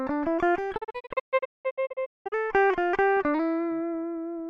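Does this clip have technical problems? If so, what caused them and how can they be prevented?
Yes. A digital broadcast dropout occurs: the receiver lost the signal and muted between 0.76 and 2.34 s, leaving short holes totalling about 0.9 s, the longest 0.19 s, each faded in 20 ms. Stronger reception and more robust error protection would prevent it.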